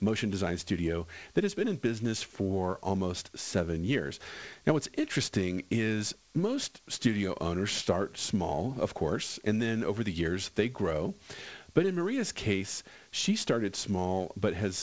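Nothing stood out on listening to this speech, which arrives over a call path with nothing above 8 kHz, as fits a wideband call codec such as G.722.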